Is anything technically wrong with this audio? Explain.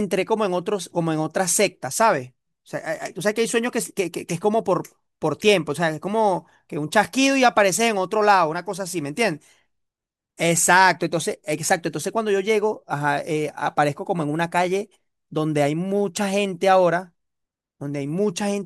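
No, nothing technically wrong can be heard in this speech recording, which holds a steady, intact signal throughout.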